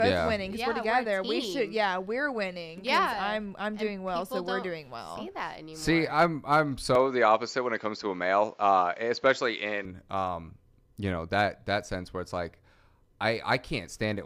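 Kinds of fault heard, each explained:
Input switched to a poorer device: from 6.95 to 9.85 s the top end vanishes above 7.6 kHz and a faint new noise floor appears, likely a different microphone.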